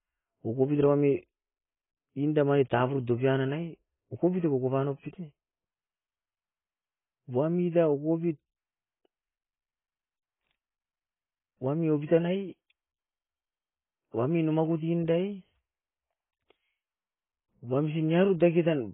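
From start to finish the speech is dull and smeared, with nothing above 3.8 kHz and a warbling, fizzy texture on sustained sounds and sibilants. This is likely AAC compression at a very low rate, fitting roughly 18 kbps, with heavy damage. The encoder pulled its cut-off down and starved the remaining bands of bits. A plain low-pass filter or narrow phone line would remove the top just as cleanly but would leave no swirling artefacts.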